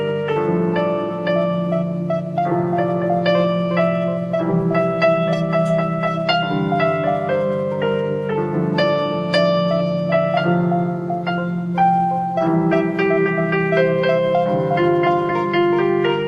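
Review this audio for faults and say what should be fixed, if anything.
Nothing stood out on listening, so there is nothing here that calls for fixing.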